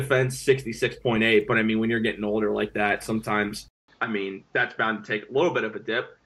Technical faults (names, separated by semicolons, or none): input switched to a poorer device